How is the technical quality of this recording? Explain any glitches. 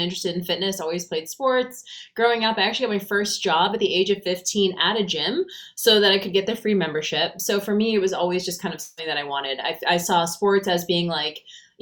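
There is one glitch: a long network dropout from 8.81 to 8.99 s, lasting about 0.18 s. At that point the sound freezes into a smeared, buzzy continuation of what came just before and fades over that stretch rather than dropping to silence. The likely cause is a gap in the incoming stream that the receiver covered by extending the last audio. When the signal resumes, the material from that interval is gone.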